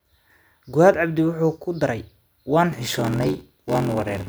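From 2.71 s to the end, the speech shows a block size mismatch (padded). Each 512-sample read is only partly filled by a shorter written block and gets a zero-filled tail. That adds an 86.1 Hz buzz and slows delivery to 0.861x with the timbre kept, visible as regular waveform gaps and vertical spectrogram stripes.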